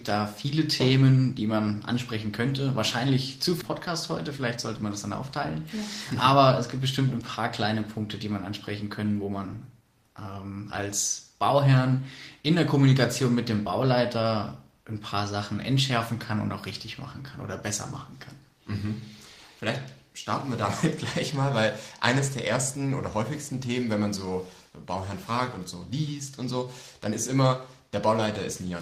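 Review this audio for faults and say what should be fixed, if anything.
At 3.61 to 3.63 s there is a skip ahead: around 0.7 s of audio was dropped and playback jumps forward with no gap fill. Prevent it by sizing the jitter buffer to avoid overflow and concealing losses.

From 4.36 to 4.90 s a jitter buffer speed-up runs the audio at 109% without a pitch change. Roughly 70 ms of pitch periods were cut to reduce excess buffered delay. Prevent it by shrinking the buffer more gradually and keeping speed adjustments below audible rates.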